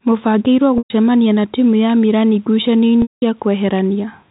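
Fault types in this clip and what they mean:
Packet loss with pitch repetition: chunks of the stream went missing, and the receiver covered each hole by looping the last pitch cycle it had, fading that loop out over about 50 ms. You get a brief buzzy hold, then silence, then speech cross-fading back in. The first gap runs 0.78 to 0.90 s (120 ms), and the second runs 3.02 to 3.22 s (200 ms), so the silence is longer there. The telephone-band G.711 sound underneath is unaffected.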